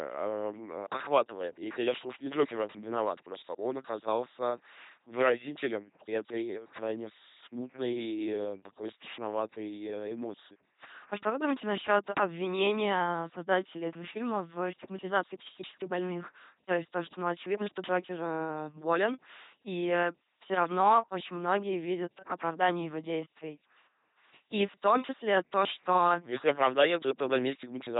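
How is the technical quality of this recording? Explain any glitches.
Quality's poor: the whole clip has gone through an LPC-10 vocoder, and it's heavy damage from start to finish. This vocoder doesn't keep the waveform. It models the vocal tract with a small all-pole filter and excites it with either a buzz or noise, one or the other at each instant. That's why the speech comes out as a flat, mechanical robot voice, with stray buzz or hiss wherever the voicing call misses. Nothing reaches above 3.8 kHz, and the overall crudeness fits a 2.4 kbit/s vocoder.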